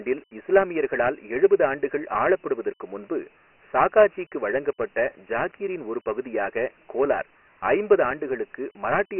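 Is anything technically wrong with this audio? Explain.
Yes. Throughout the speech the sound is thin and gritty, with a coarse hiss riding on every syllable and nothing at all above 3 kHz, so it is duller than an ordinary phone line. This is Dialogic VOX ADPCM. The codec stores each sample as a 4-bit step from a prediction, and here the damage is heavy, producing that trailing grit. The 3 kHz ceiling points to a 6,000-sample-per-second rate, which fits 24 kbps, applied after a 300 Hz to 3.4 kHz telephone band.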